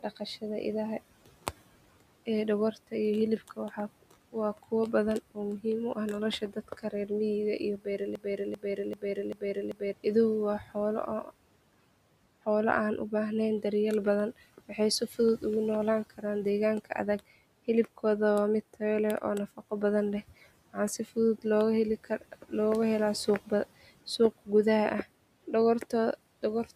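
From 0.03 to 11.3 s, the noise suppressor cuts speech. It mistakes quiet parts for the room noise, which sits about 21 dB below the speech. Soft endings and consonants drop by up to about 18 dB. Around a second in all sounds swallowed.

From 8.15 to 9.93 s, a broken-record loop takes over. A 390 ms fragment repeats five times, back to back. The likely cause is a stalled player or stream resending its last piece. The audio due there is lost.

From 13.63 to 26.71 s, the suppressor cuts speech again. Quiet parts fall by up to about 17 dB. Roughly a second in total sounds faint.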